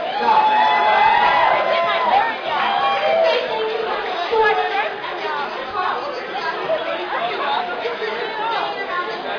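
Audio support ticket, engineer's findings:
No audible faults found.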